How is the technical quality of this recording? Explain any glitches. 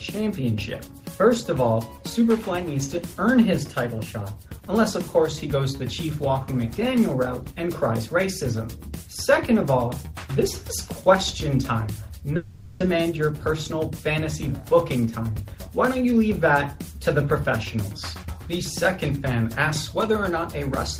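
The recording has one interruption and two short stretches of playback running fast.

From 12.36 to 12.81 s the audio stops behaving normally. The last sound is drawn out into a buzzy, fading continuation for roughly 440 ms, with no gap of true silence, and about 300 ms of material never returns. This is likely a long network dropout: packets stopped arriving, the receiver concealed the hole by extending what it last had, and playback resumed further on, about 150 ms later than before.

Right after, from 12.89 to 13.91 s, and again from 14.73 to 15.41 s, the audio sounds hurried while pitch stays unchanged, at about 106% and 107% speed respectively. This is a jitter buffer speed-up. After the outage the receiver held more audio than its target delay, so it trimmed short pitch-period-length slices repeatedly, removing around 70 ms in the first stretch and 50 ms in the second to catch up.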